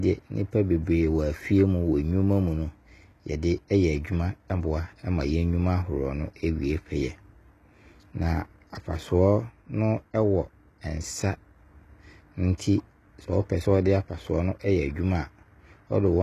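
From start to finish, s sounds in the speech turn gritty and metallic, with nothing above 12.3 kHz. This is likely HE-AAC compression at a bitrate near 16 kbps. It rebuilds treble from copied lower bands, so the top stays bright, where a plain low-pass filter would sound dull.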